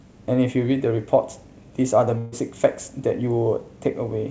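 At 2.18 s the speech stops moving forward: the last sound is stretched into a held, steadily fading sound that lasts until about 2.34 s, when the talker abruptly resumes further along, with roughly 140 ms of speech gone. This is a burst of packet loss. Consecutive audio packets never arrived in time, so the receiver concealed the gap by extending and attenuating what it had last played, all within a call path whose band stops at 8 kHz.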